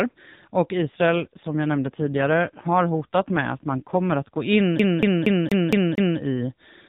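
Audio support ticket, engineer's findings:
AMR rate drop, 0.78 to 4.38 s, starting just before "in i": voice goes rough and buzzy, band unchanged, no gap. Sounds like the AMR-NB link stepping down from 12.2 kbps to around 5.9 kbps.

CD stuck on one turn, 4.79 to 6.19 s: the same 0.23 s chunk repeats six times with a tiny mute at each jump. A scratch is throwing the laser back a track.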